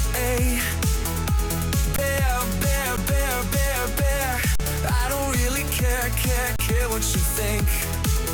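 Underruns with a held sample occur at 1.96–1.98 s, 2.97 s, 4.56–4.60 s and 6.56–6.59 s. The output buffer ran dry and the converter froze on its last value. Each appears as a flat plateau in the waveform and a blank vertical stripe on a spectrogram, and 10–40 ms of live audio was lost.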